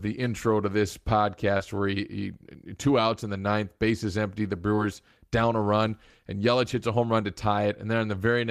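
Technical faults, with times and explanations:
1.57–1.61 s and 4.75–4.79 s, short concealed packet loss: about 20 ms of the stream arrived too late to decode, and the receiver extended the preceding sound across each gap before blending back. This leaves a brief smear just before "where he he two", and between "ninth bases empty the" and "down a run and".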